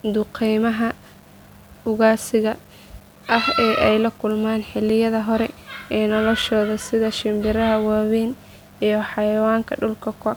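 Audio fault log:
Throughout: low bit depth without dither, a grainy distortion tracking the speech, gritty in quiet passages, noise about 35 dB below signal; likely 8-bit rounding without dither.
4.90 s: block of digital silence, a tick or dip where the audio drops out for 3.74 ms, as samples were zeroed with abrupt edges.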